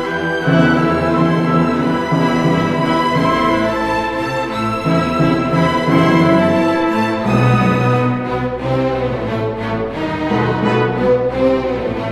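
No technical fault can be heard anywhere in the sound, so there is nothing to report by time or cause.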